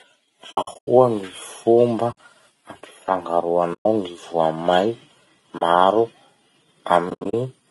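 Across the whole speech clip the voice is rough and grainy, with noise filling the gaps between harmonics and a thin, synthetic-sounding top band. This is plainly audible low-delay AAC compression, likely AAC-ELD at a rate that points to around 32 kbps. Too few bits per frame leave the spectrum between the pitch harmonics coarsely coded, so the damage sounds like hoarse graininess rather than the muffled, band-limited dullness of a simple low-pass.

AAC frame loss with muting first appears from 0.51 to 0.88 s, where about 240 ms of sound drops out in scattered pieces across roughly 360 ms, the longest gap about a tenth of a second. Shorter holes follow at 2.11 to 2.18 s (60 ms), 3.73 to 3.86 s (120 ms) and 5.57 to 5.62 s (40 ms). The last, from 7.09 to 7.34 s, loses about 160 ms in pieces spread over 240 ms, the longest gap about 70 ms. The lost lengths fit 20 ms frames. In each gap the decoder zeroed the missing frames' spectrum, and the overlapping windows fade the sound down and back up. 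That makes soft-edged silences, unlike hard-cut dropouts or concealment that fills the gap with repeated sound.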